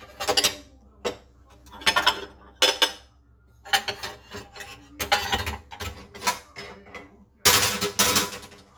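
Channel delay causes comb filtering throughout the clip. One channel lags the other by around 10 ms, and summing them to mono cancels shared content at regularly spaced frequencies, starting near 50 Hz. The result is a hollow, phasey sound with fixed spectral notches.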